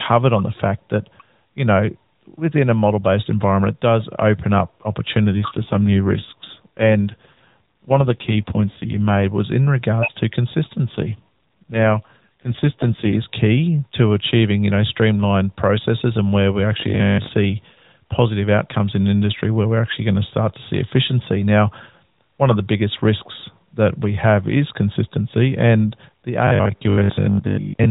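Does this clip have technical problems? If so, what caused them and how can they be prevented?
Yes. From 5.33 to 9.24 s and again from 10.90 to 13.24 s the speech turns rougher, buzzier and more synthetic, with no gap and no change in bandwidth, then clears. This is an AMR rate drop. A weak radio link made the network switch the AMR-NB codec down, which fits a step from 12.2 to 5.9 kbps. The freed bits went to error protection, leaving fewer pulses to model the voice. Keeping a stronger radio link would prevent it.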